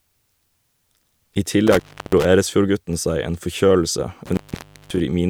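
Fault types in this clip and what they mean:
intermittent contact: at 1.67 s and 4.26 s (after "seg en forkjølelse"), a loose connection briefly opens, dropping the speech for 0.33 s and 0.53 s with crackle at the edges.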